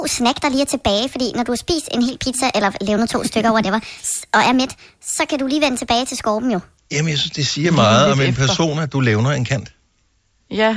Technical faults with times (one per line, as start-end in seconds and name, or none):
0.00-6.77 wrong sample rate